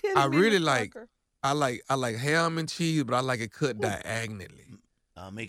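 No technical faults can be heard anywhere in the speech.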